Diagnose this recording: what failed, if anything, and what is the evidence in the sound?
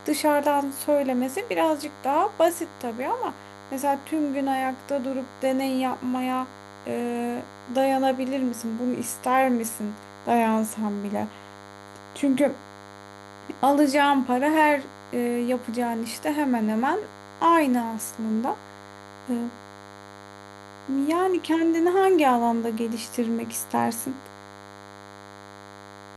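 A thin, steady buzz sits under the speech from start to finish, pitched at 100 Hz but edgy and nasal rather than a smooth hum because it carries a dense stack of harmonics. It stays roughly 20 dB below the speech. This is DECT cordless phone buzz entering at the analogue stage: a nearby DECT handset or base transmits a brief radio burst every 10 ms, and the audio circuitry rectifies each burst into a click, producing the 100 Hz buzz.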